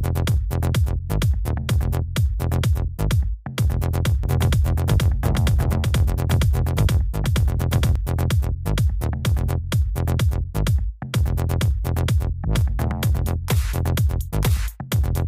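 A second, slower capture path or an out-of-step edit has likely mixed the audio in twice, producing a doubled audio track from 4.24 to 7.96 s. A dry full-band copy trails the original by roughly 400 ms at about equal loudness, cutting in and out abruptly.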